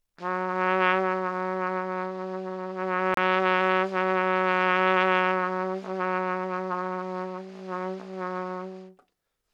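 A Bluetooth dropout occurs from 3.14 to 3.17 s: the sound cuts to silence for about 29 ms with abrupt or briefly faded edges, then returns further along, as though it had kept playing through the gap. The likely cause is audio packets failing to reach the headphones in time and being discarded, so the output stayed silent until valid data arrived again. A hole of that length fits the loss of two packets.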